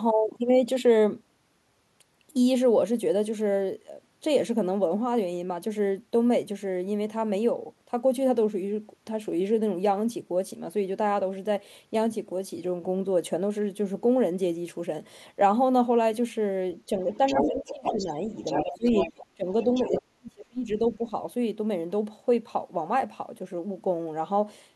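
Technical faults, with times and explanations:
17.1–18.13 s, 18.35–19.26 s and 19.6–20.01 s, other side's voice leaking through: a second voice runs under the talker, at first about as loud, then progressively weaker. This is likely far-end loudspeaker echo the canceller missed. A spectrogram shows a second, overlapping set of harmonic striations.
17.35–18.31 s, 18.64–18.98 s, 19.35–19.47 s and 19.83–21.12 s, speech suppressed in double talk: the talker dips by roughly 15 to 20 dB, and the last stretch drops about 40 dB for close to a second. The likely cause is the canceller attenuating everything during overlap. The waveform envelope is visibly gouged, and the spectrogram darkens across the band.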